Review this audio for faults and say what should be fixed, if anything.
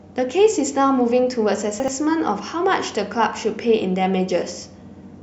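Chunks out of order from 1.8 to 1.88 s: one 40 ms chunk plays one chunk late, making a brief jumbled stutter. The waveform shows three abrupt seams, and the spectrogram shows broken contours with vertical lines. Sequence-numbering chunks and reordering them before playback prevents this.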